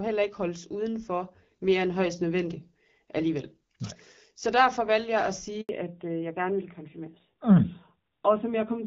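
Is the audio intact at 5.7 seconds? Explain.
No. Right after "derfor valgte jeg at" there's a handover gap from 5.61 to 5.69 s, about 80 ms where the call was being passed between networks and no speech frames got through. The sound drops away quickly and there's just silence until the new link picks up, so whatever was said in that window is simply gone. It ends about 10 ms before the 5.7 s mark.

By 5.7 s you're hearing the fallback to narrowband, which runs from 5.69 s to the end. The call came back on an older narrowband codec instead of the HD Voice wideband one, and everything above 4 kHz is cut off. Compared with the earlier part, the voice sounds duller and rougher. The earlier part only has light wideband codec damage, which fits around 12.65 kbit/s. The later part sounds like a low narrowband rate, roughly 7.4 kbit/s.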